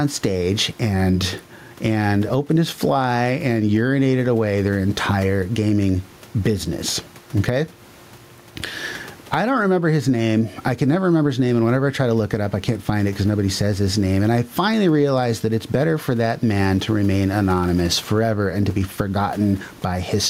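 Gain pumping runs through the whole speech recording. The room noise sits about 37 dB below the speech, and the gain swings by around 10 dB. Likely cause: microphone gain set far too high, with a fast limiter clamping it.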